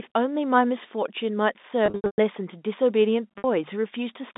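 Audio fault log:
1.86–2.18 s and 3.38–3.44 s, packet loss with pitch repetition: the first stretch stutters with held, buzzy tones that fade to brief silence, since about 260 ms went missing, one gap reaching 120 ms. The 60 ms loss later holds briefly, each gap bridged by repeating the last pitch period.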